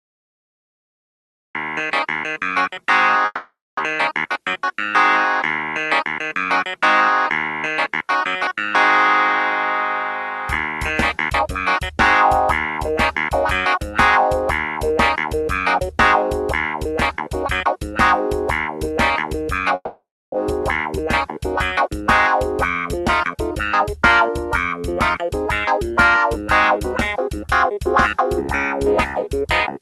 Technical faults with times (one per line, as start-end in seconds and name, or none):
3.25-3.81 long network dropout
5.64-6.45 jitter buffer speed-up
19.75-20.36 long network dropout
20.50-21.04 jitter buffer speed-up
22.80-25.79 jitter buffer speed-up